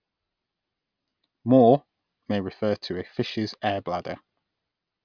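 Nothing stood out on listening to this speech recording.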